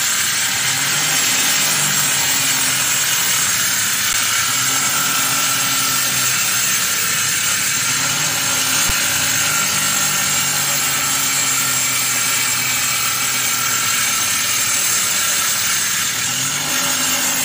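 At 4.13 s and again at 8.89 s the sound briefly freezes on a flat, held level for about 10 ms and 6 ms, then resumes. This is an underrun with held sample: the output buffer ran dry, the converter held its last value, and a few milliseconds of audio were skipped.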